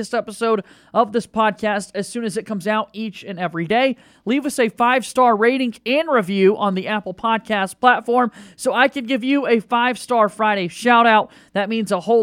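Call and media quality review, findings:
No audible faults found.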